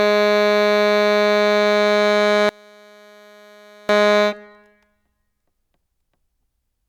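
From 2.49 to 3.89 s the music collapses to a faint trace, about 31 dB down, with its centre and low end nearly gone. The likely cause is one channel inverted: reversed polarity makes the shared material cancel when the channels combine.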